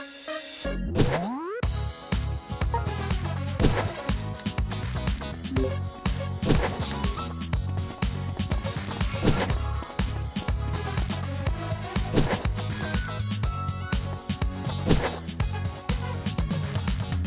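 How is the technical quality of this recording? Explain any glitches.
No glitches or technical faults are audible anywhere in the recording.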